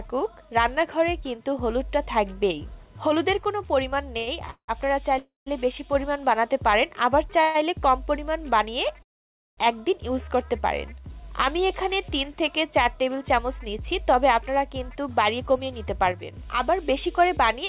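From 4.18 to 4.85 s there are repeated stalls, a stutter. Packets arrived late three times and the jitter buffer ran dry. The receiver stretched the last sound to cover about 0.3 s, the longest gap 176 ms. More than half that span is filler, so the audio drags and hiccups.

Three call audio freezes follow. At 5.18 s the sound hangs for 0.28 s, fading to silence for 0.15 s. At 7.41 s a short 0.13 s hold plays out without going silent. At 9.02 s the sound stops for 0.55 s, nearly all of it silent. Each time the audio resumes where it stopped. The likely cause is packets held up in transit, leaving the buffer empty.

From 13.80 to 17.59 s comes a jitter buffer speed-up. The buffer had built up surplus delay. The receiver trimmed many tiny pitch-period slices, about a fifth of a second in all. The audio runs at 105% speed, slightly hurried, with the pitch unchanged.

Throughout, the call path passes nothing above 4 kHz, which fits G.711 A-law.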